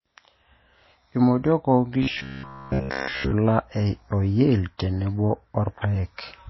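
Throughout, the speech sounds dull and smeared, with nothing above 5.8 kHz. This is likely low-bitrate audio saved at a high bitrate, a very low-rate MP3 re-encoded larger without recovering anything.

From 2.03 to 3.32 s the voice becomes a rigid metallic buzz at 66.7 Hz, likely robotic sound from repeated short buffers, which fits a looped segment of about 15 ms.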